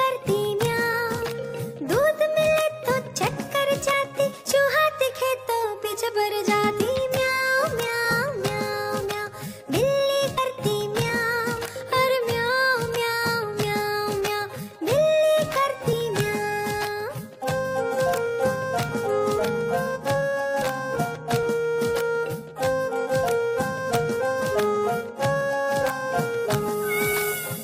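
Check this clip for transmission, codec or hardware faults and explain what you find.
There are four instances of compressed frames skipped. They occur at 10.37 s, 15.92–15.94 s, 20.61 s and 25.90–25.96 s. Whole coded frames never reach playback, so the audio jumps ahead by about 70 ms at the first and third, and about 20 ms at the other two.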